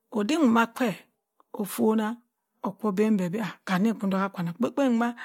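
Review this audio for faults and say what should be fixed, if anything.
No faults found; nothing to fix.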